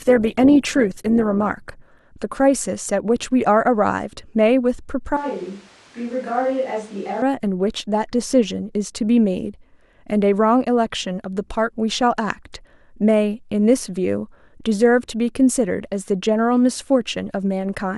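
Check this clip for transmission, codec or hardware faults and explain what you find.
Two faults stand out, one from the stream's codec and one likely from the recording hardware.

From 0 to 2.0 s the clip shows an adaptive stream starting at a low bitrate. The player opened on a lean version to begin quickly, so the treble is thin and partly synthetic and codec artefacts are stronger. This fits roughly 16 kbit/s Opus. At 2.0 s it steps up to a cleaner stream, consistent with about 64 kbit/s, with no gap or dropout. A mid-stream network dip differs: quality would fall after playback was already good, and a stall or rebuffering gap would often accompany it. Here the poor quality sits only at the very start and improves abruptly and seamlessly.

From 5.17 to 7.22 s the speech suddenly turns roomy and hollow, loses bass and drops about 10 dB. Background noise rises to only about 25 dB below the speech. 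The likely cause is a switch to a distant microphone: the close microphone's signal dropped out and a farther pickup, such as a camera's, filled in. The sound changes abruptly at both edges, and the codec quality itself is unchanged. That sets it apart from the bitrate fault, which degrades the treble and adds artefacts rather than adding room reverberation.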